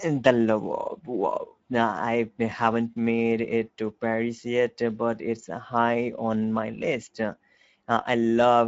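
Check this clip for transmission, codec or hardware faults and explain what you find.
One codec fault runs through the whole clip. Speex codec damage is plainly audible from start to finish. Speex is a CELP speech coder. It models the vocal tract with a filter and spends limited bits on the excitation signal that drives it. Here that excitation is coarse, which fits a middle wideband setting of roughly 17 kbps. The speech sounds noisy and hoarse. Nothing is present above 7.7 kHz, so the top of the band is cut off.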